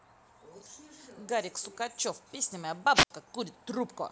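At 2.94 s there is a brief surge of hiss and static, then the sound drops into a hole of near silence lasting 72 ms before returning by 3.10 s. This is a wireless microphone squelch dropout: the FM radio signal faded until the receiver's squelch muted the output.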